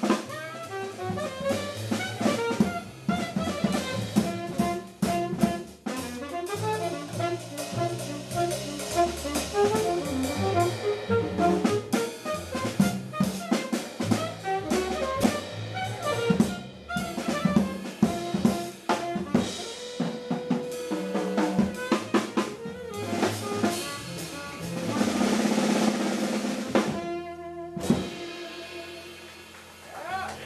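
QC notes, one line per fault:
15.21 to 15.24 s, damaged data in a compressed stream: a brief glitch as the decoder misreads corrupted frames, loses sync and resumes at the next frame header.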